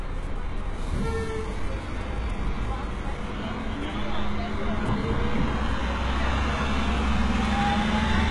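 A recording of everyday sounds with HE-AAC compression damage throughout. Nothing comes through above 11.4 kHz. The treble is synthetic, rebuilt by copying lower bands upward. Harmonics clash, so sharp sounds turn gritty and metallic. The heavy damage likely points to a bitrate near 12 kbps.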